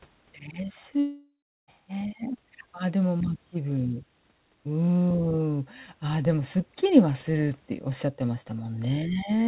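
At 1.0 s the stream most likely suffered a long network dropout: for about 0.68 s no audio reached the receiver, and that stretch was never played. The receiver papered over the hole by extending the last sound into a buzzy tone that fades away, leaving roughly 0.35 s of plain silence before the speech resumes at 1.69 s, picking up further on with the lost portion simply gone. Across the clip, nothing sounds above 4 kHz, consistent with a G.711-style call codec.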